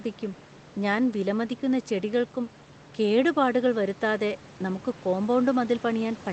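No faults are present: the room noise sits about 22 dB below the speech, and the call-codec path tops out near 8 kHz, consistent with Opus at a modest bitrate.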